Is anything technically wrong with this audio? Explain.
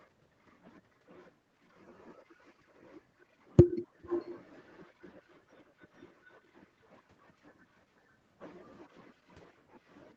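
Yes. An echo leak appears from 4.08 to 4.37 s. A delayed copy of the speech comes back about 435 ms after the original, fairly faint, roughly 15 dB below the talker. The likely cause is a far end playing the call over a loudspeaker, with its echo canceller failing to remove everything the microphone caught, so that residue was returned. It is heard as a brief, trailing repeat. The audio is band-limited to 8 kHz, consistent with an Opus call path.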